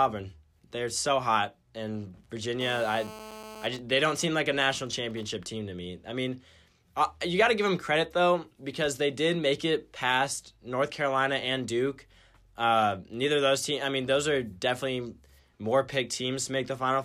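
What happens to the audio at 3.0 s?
At 3.0 s a GSM phone buzz sits under the speech, running from 2.61 to 3.66 s. A nearby 2G handset on a call pulses its transmitter 217 times a second, and the audio circuitry rectifies those bursts, producing a steady, harsh, harmonic-rich 217 Hz rasp about 15 dB below the speech.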